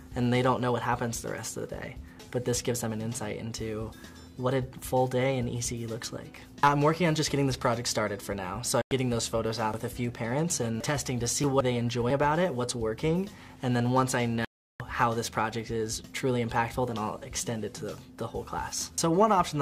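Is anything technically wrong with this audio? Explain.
Yes, two digital broadcast dropouts: the receiver lost good frames and muted, cutting the sound to silence at 8.82 to 8.92 s and again at 14.45 to 14.80 s.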